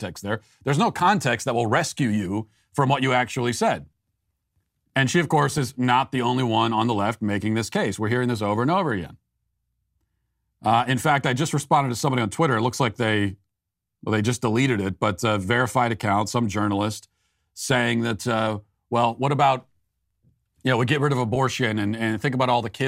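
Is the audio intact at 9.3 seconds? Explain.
Yes, the audio is intact at 9.3 s, with no dropout, glitch or other fault at that point.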